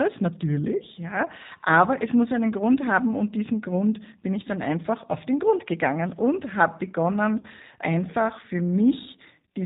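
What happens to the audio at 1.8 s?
At 1.8 s the speech is running through G.729 codec coding, which affects the whole clip rather than just that moment. The sound is rebuilt from a vocal tract filter, a pitch predictor and a few pulses per 5 ms subframe, which fits an 8 kbit/s coder, so it comes across as plainly rough and synthetic. On a spectrogram everything above 4 kHz is empty, and harmonics look smeared and blocky from frame to frame.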